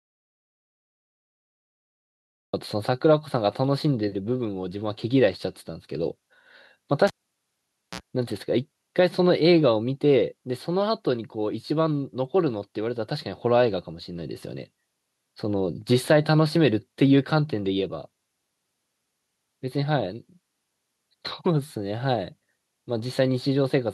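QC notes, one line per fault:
0.00–2.53 s, audio dropout to silence: the clip opens already in a dead gap, silence with no room tone underneath, and the speech only arrives at 2.53 s as if cut in mid-flow. That dead silence, rather than a quiet room, is the signature of an input that was lost while the recorder kept writing samples, most likely a disconnected device, failed link or stray mute. Whatever came before 2.53 s is simply gone.
7.07–8.01 s, cable pulled and plugged in: a pop at 7.07 s as the live connector comes out, then about 0.88 s of near silence while the line is open. While only the tip touches, a short burst of 60 Hz mains buzz, about 56 ms long, leaks in before the ground contact seats. A second pop follows, and the speech returns at 8.01 s.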